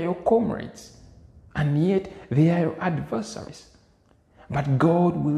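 At 3.46 s, compressed frames are skipped: roughly three frames of about 23 ms each go missing, so the audio leaps ahead by around 70 ms.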